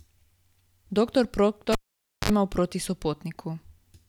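At 1.72 s the speech is cut by a cable pulled and plugged in. A pop marks the break, then about 0.53 s of near silence while the connection is open. As the plug goes back in, 58 ms of 50 Hz mains buzz sounds while only the tip makes contact. A second pop brings the sound back at 2.30 s. A plain dropout would have neither the pops nor the hum.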